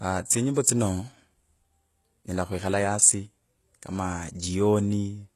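The clip is speech, and its treble sounds synthetic throughout. The s sounds come out gritty and metallic or lispy, and nothing is present above about 12.3 kHz. This is likely HE-AAC compression with heavy damage, consistent with a very low bitrate in the region of 16 kbps. The codec encodes only the lower spectrum and fills in the top by spectral band replication, copying lower bands upward under a coarse envelope. The treble therefore reaches higher than plain AAC would at that bitrate, but its harmonics no longer line up with those below the crossover. From 0.63 to 0.66 s there is pre-echo: a short hiss about 33 ms long arrives just before a sharp onset, and the attack itself sounds softened and smeared. The transform codec spread the quantisation noise meant for that loud attack across its whole block, so the noise also spills into the quiet moment leading up to it.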